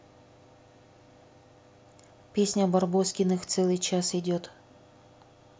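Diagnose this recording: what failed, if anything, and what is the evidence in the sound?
Nothing in this speech recording points to a failure at any stage of the chain, from analogue wiring and conversion through to storage and playback.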